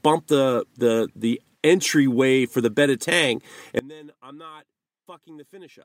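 At 3.79 s the speech cuts out abruptly for good. This audio dropout to a faint residue leaves only a faint leak, likely a lost feed on a live path.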